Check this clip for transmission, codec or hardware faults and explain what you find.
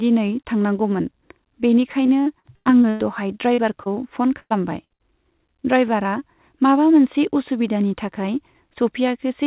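Yes, there are transmission faults: packet loss of three kinds between 2.06 and 5.02 s, in speech carried over a narrowband call path whose band stops at 4 kHz, which fits G.711 mu-law at 64 kbps.

Repeated packet loss (robotic sound), 2.06–3.02 s: six gaps, the longest 103 ms, about 320 ms missing in all, so a third of this stretch is patched. Each patch repeats the preceding sound before the next hole arrives, giving choppy speech with pieces missing. Its density sets it apart from isolated losses.

Short concealed packet loss, 3.54–3.60 s (40 ms) and 3.84–3.88 s (20 ms): the decoder extended the last pitch or noise across each hole and blended back. These are heard as brief smears or wobbles, too short to fade and far sparser than the run before them.

Burst of packet loss, 4.40–4.52 s, 4.84–4.92 s and 4.94–5.02 s: 100, 60 and 60 ms lost. The concealment holds the last sound and turns it down, and in the first burst it falls to silence for about 50 ms. 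The held buzz or fading hiss, followed by a jump forward, distinguishes these from the shorter smears.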